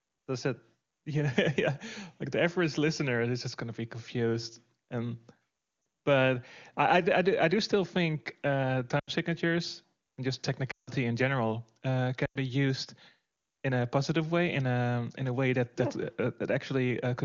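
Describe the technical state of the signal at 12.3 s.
Lost AMR speech frames run from 12.25 to 12.38 s, just after "in general uh". About 100 ms drops out. The decoder repeats the last sound with falling gain, dropping to near silence within two frames.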